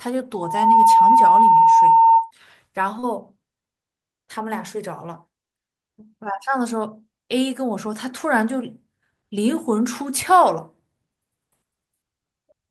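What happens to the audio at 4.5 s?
Nothing goes wrong at 4.5 s; the speech carries on intact through that moment, with no dropout, click or other fault to be heard.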